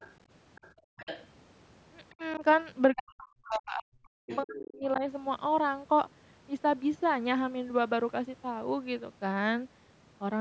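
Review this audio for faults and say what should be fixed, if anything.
Faint traces of the other side's voice leaking through can be heard at 0.0 to 0.1 s, 0.55 to 1.27 s, 2.32 to 2.39 s, 3.52 to 3.58 s and 4.28 to 4.39 s. They sit roughly 15 to 25 dB below the main speech. The likely cause is the far end playing on a loudspeaker. The echo canceller then failed to subtract all of it from the microphone. Better speaker-to-microphone isolation, or a canceller that adapts faster, would prevent it.

The background is gated by the echo canceller from 0.74 to 0.97 s. The room sound drops sharply, by about 40 dB at its deepest, for around a fifth of a second. It then comes back. This happens while the loudspeaker echo is present. The canceller clamps the microphone hard to hide that echo, and the room tone goes with it. Gentler suppression, or comfort noise during those dips, would prevent it.

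Speech suppressed in double talk is heard from 2.11 to 2.43 s and from 2.93 to 5.02 s. In the first stretch the voice dips by roughly 25 dB for a brief moment. The second is worse. The voice drops by as much as about 40 dB and breaks up over roughly a second and a half. The likely cause is both sides talking at once. The canceller could not tell its own talker from the echo, so it turned both down. Better double-talk detection in the echo canceller would prevent it.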